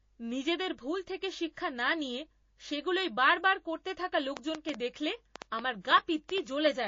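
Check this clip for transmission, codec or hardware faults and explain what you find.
Three faults are present: low-bitrate compression damage throughout, two pre-echoes, and a train of clicks in the second half of this speech clip.

MP3 compression: Throughout, an encoder likely starved of bits, consistent with about 32 kbps MP3, drops weak frequency lines and treble, leaving plainly audible watery, swirly damage.

Pre-echo: At 1.53–1.57 s and 5.81–5.85 s, the encoder spread quantisation noise across a 72 ms block, apparently never switching to short blocks. This put a hiss about 12 dB and about 11 dB louder, lasting 43 ms and 39 ms, before sharp attacks.

Train of clicks: From 4.37 to 6.67 s, something likely injecting pulses, such as nearby interference or a faulty connection, adds about ten similar clicks at an irregular 4.79 per second, peaking roughly 15 dB above the speech.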